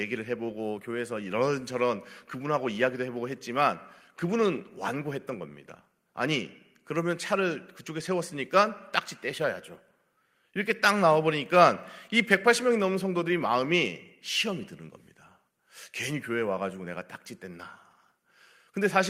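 Nothing in this speech recording needs fixing; there are no technical faults to point to anywhere in it.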